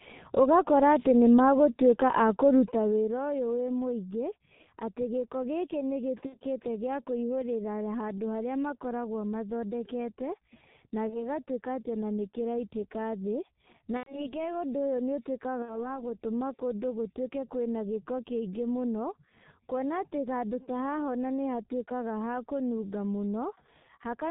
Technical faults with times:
0.00-24.31 G.723.1 codec
6.26-6.38 VoIP packet loss concealed by the speech codec
11.09-11.19 VoIP packet loss concealed by the speech codec
13.97-14.36 VoIP packet loss concealed by the speech codec
15.62-15.98 VoIP packet loss concealed by the speech codec

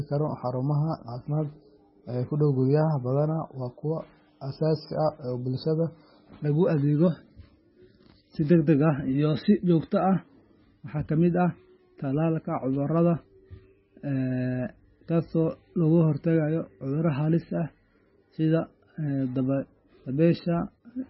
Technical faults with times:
0.00-21.09 MP3 compression

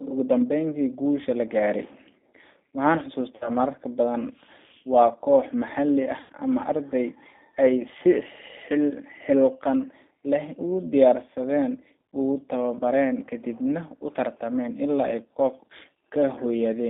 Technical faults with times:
0.00-16.89 G.729 codec
3.36-3.51 VoIP packet loss concealed by the speech codec
6.21-6.32 VoIP packet loss concealed by the speech codec

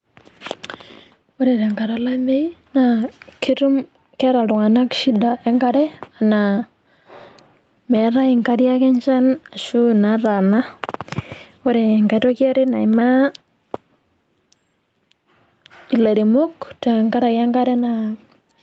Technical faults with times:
0.00-18.62 gain pumping

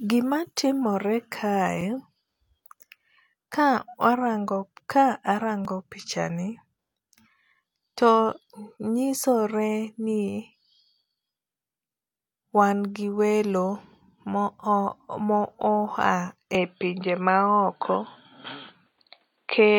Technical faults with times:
1.81 block of digital silence
5.65 block of digital silence
16.55-19.79 input switched to a poorer device

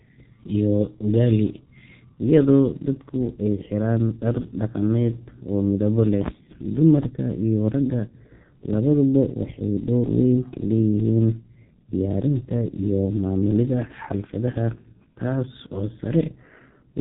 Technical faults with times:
0.00-17.00 G.723.1 codec

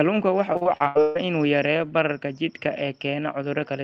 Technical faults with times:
0.53-1.17 repeated packet loss (robotic sound)

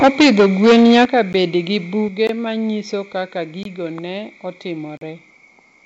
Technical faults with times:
0.01-1.21 microphone overload
0.05 microphone volume stepped down
1.05 microphone volume stepped down
1.33 block of digital silence
2.08 microphone volume stepped down
2.27-2.29 block of digital silence
3.63-3.65 block of digital silence
4.97-5.01 block of digital silence

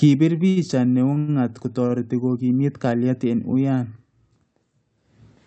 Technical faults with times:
0.49-0.58 short stall from a late packet
1.14-1.30 short stall from a late packet

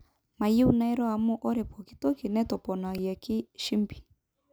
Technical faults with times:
2.98 repeated buffer

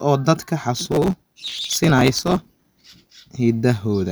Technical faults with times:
0.75-3.10 processor overload crackle

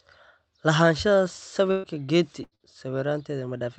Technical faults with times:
1.71-1.86 burst of packet loss
2.43-2.54 burst of packet loss
2.55-2.63 short concealed packet loss

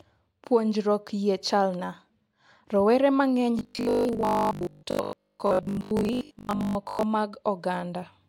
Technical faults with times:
3.59-7.03 robotic sound from repeated short buffers

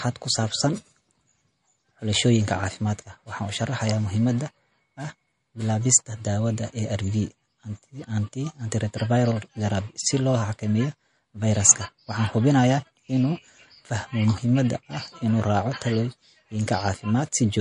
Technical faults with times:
0.00-17.61 MP3 compression

